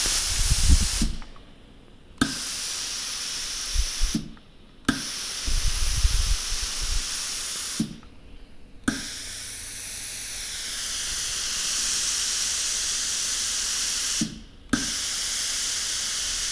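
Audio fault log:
Nothing stood out on listening to this audio.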